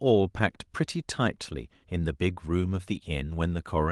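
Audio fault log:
No faults can be heard anywhere in the speech. Nothing in the recording calls for an entry in this log.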